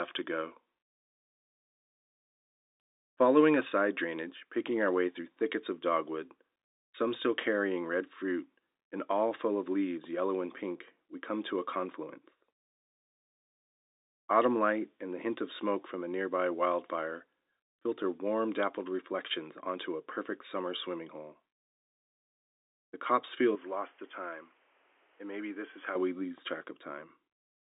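From 23.55 to 25.95 s, starting just before "we lose track", the sound abruptly dulls above 3.5 kHz, drops about 5 dB and gains background noise, likely an input switched to a poorer device.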